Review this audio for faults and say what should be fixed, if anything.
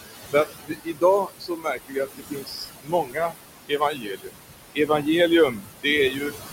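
Noise suppressor artifacts run through the whole clip. The room noise sits only about 9 dB under the speech, and the suppressor drops it by about 19 dB in the gaps. The background therefore pumps up under each phrase and sinks between them. A gentler suppression depth would keep that floor steadier.

Speech cut by the noise suppressor shows up at 0.32–1.03 s, 1.25–3.4 s, 3.68–4.36 s, 4.75–5.06 s, 5.51–5.86 s and 6.11–6.33 s. Quiet speech gets judged as noise and pulled down with it, by about 20 dB at worst, though only about 13 dB and 8 dB in the 4.75 s and 6.11 s spans. The cut parts sound swallowed, and the 1.25–3.4 s stretch loses around a second and a half in total. Getting more level at the mic relative to the room, or backing off the suppressor, would let it tell speech from noise.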